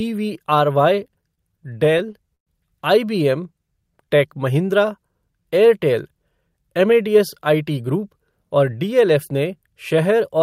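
It's a speech clip with three jitter-buffer problems. From 1.07 to 2.49 s there's a stutter of repeated stalls, 17 of them, where late packets kept draining the buffer and the receiver stretched the last sound to bridge each wait. That's 281 ms of fill in all, about a fifth of the span, with the longest hold at 116 ms. Nothing actually goes missing, it just drags and hiccups. Then 3.53 to 4.39 s, right before "महिंद्रा एयरटेल", you get a jitter buffer slow-down. The receiver was rebuilding its reserve by repeating tiny pitch-period chunks, adding 100 ms, so the speech plays at 89% speed with the pitch unchanged and sounds drawn out. Last, from 6.41 to 7.99 s, between "महिंद्रा एयरटेल" and "और डीएलएफ़ ने", there's a jitter buffer speed-up. The buffer was overfull, so it trimmed small pitch-period pieces, roughly 150 ms worth, pushing playback to 108% at the same pitch, and it comes across a bit hurried.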